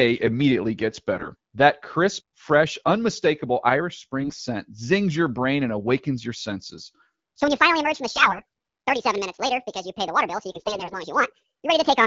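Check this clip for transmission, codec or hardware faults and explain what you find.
Yes, two kinds of fault are present in this speech, carried over an AMR wideband (HD Voice) link whose coding at 12.65 kbit/s leaves only light roughness of its own.

AMR bit errors occur at 1.14 to 1.28 s, right after "immediately gets"; at 4.20 to 4.42 s, just before "zings your brain and"; at 8.11 to 8.41 s; and at 10.55 to 10.98 s. In each burst, flipped bits in the weakly protected part of the frames pass the checksum. The decoder then places its excitation pulses wrongly and misreads fine pitch, gain and spectral detail, so the voice turns hoarse, scratchy and gargly. Pitch and level roughly hold, and the sound never drops out. That continuity separates these bursts from lost frames, which leave gaps or concealment fades. The bursts are short, from roughly 140 ms to 440 ms. Their lengths point to somewhere around 7 to 20 frames each. 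The error density is moderate in the first burst and heavier by the last.

From 7.41 s, just after "and awakens your senses", to the end of the clip, the audio plays as a section at the wrong speed. It runs 1.73 times too fast, which lifts the pitch by about ten semitones. Pitch and tempo rise together, so the speech sounds high and hurried. A pitch-shifter would raise the pitch and keep the pace. The likely cause is playback or editing against the wrong clock. The last two bit-error bursts fall inside this sped-up stretch.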